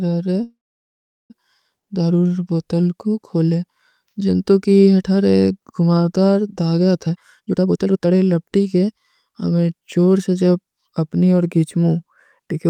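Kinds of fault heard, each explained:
Call audio freeze: From 0.43 to 1.32 s the sound stalls. The last fragment carries on briefly as a fading buzz or hiss, then about 750 ms of silence follows before the audio resumes exactly where it broke off. Roughly 865 ms of filler was inserted and nothing was lost, so everything afterwards arrives that much later. The likely cause is delayed packets leaving the receiver's jitter buffer empty, so it stretched the last sound until the stream returned.
Jitter buffer speed-up: Between 7.06 and 9.59 s the speech rushes forward at about 134% of normal rate, yet its pitch stays unchanged, giving a hurried, clipped delivery. The receiver was holding more buffered audio than it wanted and trimmed the backlog by repeatedly cutting out tiny slices one or a few pitch periods long. Together those cuts remove around a second of audio across the stretch.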